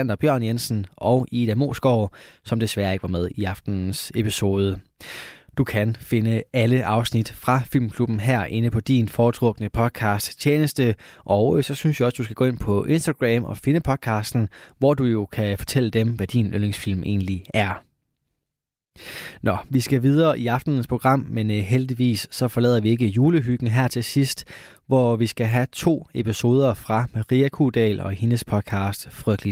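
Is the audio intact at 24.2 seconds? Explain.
Yes, the audio is intact at 24.2 seconds, with no dropout, glitch or other fault at that moment.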